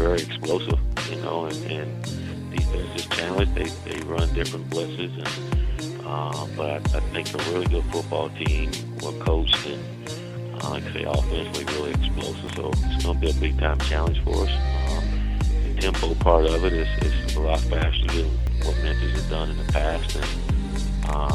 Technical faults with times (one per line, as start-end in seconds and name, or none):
0.51 overlap between stream segments
6.49 overlap between stream segments
12.47 overlap between stream segments
18.47 overlap between stream segments